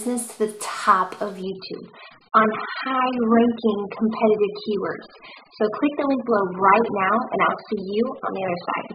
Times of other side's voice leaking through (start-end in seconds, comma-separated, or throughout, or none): none